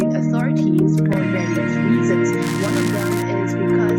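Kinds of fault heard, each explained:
Overlap between stream segments: two chunks of the stream claim the same stretch of time, so the player trims what it thinks is a duplicate, except that audio wasn't actually repeated. A few milliseconds simply go missing and the waveform steps abruptly. Here that's a single tiny click or skip at about 1.13 s, where one segment hands over to the next. With the segments about 4 s long, there's only the one seam in this clip.
Buffer tearing: the software filling the ring buffer and the hardware reading it out have drifted, so their positions cross inside every period. A small slice of each buffer plays audio from roughly ten milliseconds earlier, with hard joins on both sides. From about 2.42 to 3.22 s you get a gritty, robotic buzz at 345 Hz, which fits a 128-sample buffer, and it rides along only while there's signal.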